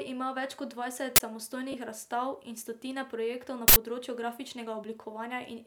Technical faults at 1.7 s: lost LE Audio frames

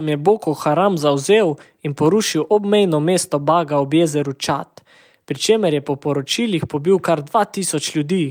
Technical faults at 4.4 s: none

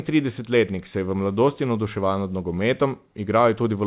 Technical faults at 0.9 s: clock drift between sender and receiver; repeated timing corrections

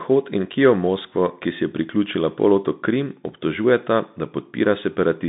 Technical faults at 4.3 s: Bluetooth CVSD headset codec

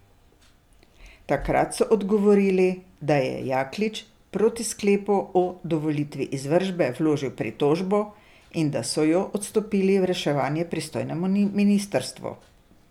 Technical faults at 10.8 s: none

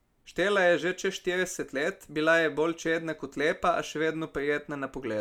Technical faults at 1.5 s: none

